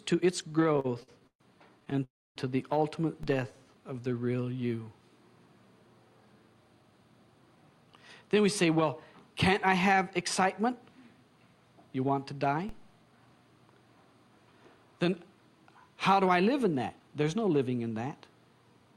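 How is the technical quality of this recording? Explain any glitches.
The recording has several network-delivery faults, mostly timing problems where the audio stalls, drags or rushes.

From 0.49 to 1.42 s, and again from 1.80 to 2.02 s, there are repeated stalls (stutter). Packets arrived late, so the jitter buffer kept emptying and the receiver stretched the last sound. The first stretch has 13 gaps, the longest 130 ms, covering about 35% of that span. The second has 6 brief gaps of 15 ms or less. Together they sound choppy and halting.

From 2.04 to 2.38 s comes a call audio freeze, likely caused by packets held up in transit. The last sound is held and fades, leaving about 260 ms of near-silence. The audio then resumes 315 ms later, with nothing lost.

At 3.23 s and 12.69 s there is a DC step. The waveform's zero line suddenly shifts, then drifts back, and each jump is heard as a low thump.

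From 3.34 to 4.44 s there is a jitter buffer slow-down. The receiver repeated tiny pieces to rebuild its reserve, adding 142 ms. The sound plays at 88% speed with its pitch unchanged, so it drags.

From 6.26 to 8.76 s, and again from 16.66 to 17.25 s, there is a jitter buffer speed-up. The buffer was overfull, so short slices were trimmed, about a third of a second in the first stretch and under a tenth in the second. Playback runs at 110% and 109% speed respectively, and sounds hurried at the same pitch.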